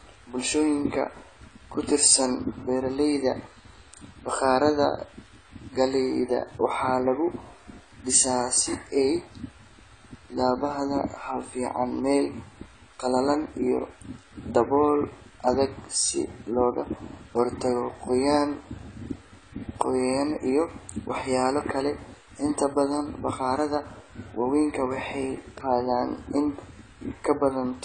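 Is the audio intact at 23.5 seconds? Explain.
No. At 23.5 seconds, as across the whole speech clip, the sound is dull and smeared, with a fizzy, warbling edge on sibilants and sustained vowels. On a spectrogram, nothing appears above 9.6 kHz, and the bands below show holes and blotchy patches. This points to AAC compression, likely AAC-LC at a low rate around 24 kbps. Starved of bits, the encoder lowers its cut-off and coarsely quantises each frame's frequency lines.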